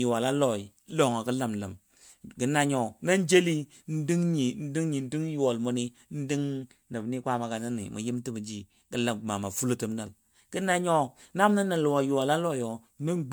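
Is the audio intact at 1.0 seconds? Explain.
No. At 1.0 s, as throughout, there is generation loss: likely repeated MP3 encoding, about five passes, each requantising on a shifted frame grid, leaving swirly, hollow, smeared speech with blurred attacks.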